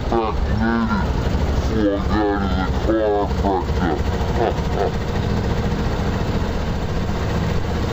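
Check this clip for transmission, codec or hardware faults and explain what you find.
There is one fault, present for the whole clip: stereo read as mono. A two-channel stream has been taken as a single channel, so its alternating left and right samples play back to back as one continuous signal. Every frame now lasts two samples instead of one, so the audio runs at 0.5 times its proper speed and sits 12 semitones, a full octave, too low. A fainter mirrored copy of the sound also shows up in the upper half of the spectrum.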